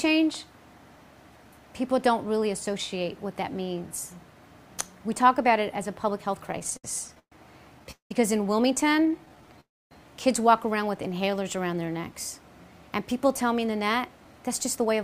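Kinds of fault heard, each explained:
Repeated stalls (stutter): Late packets kept emptying the jitter buffer. The sound hitches at nine points from 6.49 to 7.32 s, the longest 124 ms, and eight brief ones from 8.86 to 9.59 s.
Call audio freeze: The sound trails off into silence, then resumes unchanged, for 194 ms at 7.91 s and 304 ms at 9.61 s. The likely cause is held-up packets draining the buffer.
Jitter buffer slow-down: Repeated pitch periods stretch the sound from 10.91 to 12.13 s. It plays at 91% speed, about 114 ms longer, with the same pitch.
Jitter buffer speed-up: Trimmed pitch periods hurry the sound from 13.80 s to the end. It runs at 110% speed, with roughly 150 ms cut.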